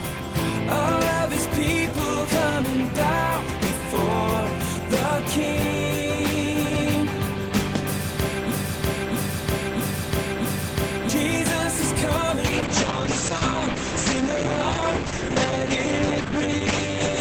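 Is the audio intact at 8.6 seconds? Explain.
No. At 8.6 seconds you're right inside a broken-record loop running from 8.51 to 11.09 s. A fragment about 0.65 s long plays four times back to back, each repeat identical, so the sound stutters in place instead of moving forward. Whatever should have been heard across that stretch is simply gone. The likely cause is the player or stream stalling and resending the last chunk it held until it caught up.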